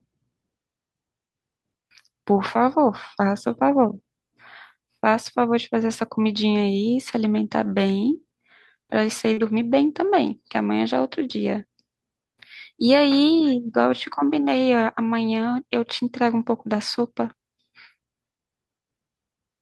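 At 7.63 to 7.65 s there's a lost packet rebuilt from error correction. One 20 ms packet didn't arrive, but the next one carried a lower-bitrate spare copy, so the decoder played that and there's no gap. You'll hear that 20 ms go a bit grainier and rougher than the speech around it, and if the call is full-band the top end thins out briefly, since the spare copy doesn't carry those highs and the decoder has to guess them.

Then from 9.33 to 9.39 s comes a short concealed packet loss. About 40 ms never showed up in time, and the receiver bridged the hole by carrying the last sound forward, extending its pitch if voiced or shaping noise if not, before blending back into the real signal. It comes across as a quick smear or wobble in the speech. Right at the tail, 9.37 to 9.39 s, the last 20 ms is instead a lost packet rebuilt from error correction, so the concealment covers roughly 36 ms and the rebuilt copy leads back into clean audio with that same slightly rough, noisier texture.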